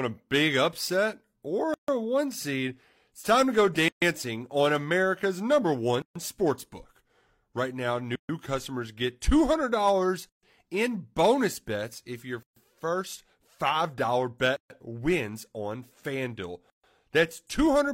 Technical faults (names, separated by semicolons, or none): gap at a join of encoded pieces